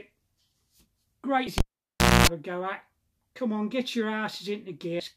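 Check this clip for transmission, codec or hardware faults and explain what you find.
Three faults are audible: two short bursts of damaged data in a compressed stream and one cable pulled and plugged in.

Damaged data in a compressed stream occurs at 1.44 to 1.47 s and again at 4.97 to 5.00 s. Each lasts about 34 ms. Corrupted bytes make the decoder misread or reject frames, lose sync and hunt for the next valid header. The result is a brief chirp or squawk.

The cable pulled and plugged in runs from 1.58 to 2.27 s. A pop marks the disconnection, then the sound falls to near silence for about 644 ms. A 60 Hz mains buzz is heard for about 248 ms while only the plug tip makes contact, and a second pop comes as the signal returns. The pops, the silence and the mains tone distinguish it from a codec error, which never introduces hum.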